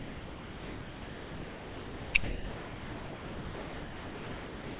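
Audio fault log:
0.00–2.14 s and 2.24–4.79 s, sound dropped by the voice detector: the speech gives way to steady, featureless low-level comfort noise for about 2.14 s and then 2.56 s, with only a brief return near 2.2 s. This is likely the sender's detector misjudging the speech as background and halting transmission. On a waveform both stretches appear as a flat, even band. On a spectrogram they show uniform noise without harmonics or formants, and with nothing above 4 kHz from the call path's band limit.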